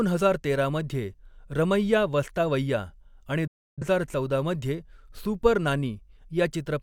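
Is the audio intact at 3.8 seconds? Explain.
No. A digital broadcast dropout mutes the speech from 3.47 to 3.83 s: the receiver lost valid frames and silenced output, fading out over about 8 ms. Roughly 0.3 s of programme is missing. The waveform flattens to near silence, and the spectrogram shows a blank vertical band across every frequency.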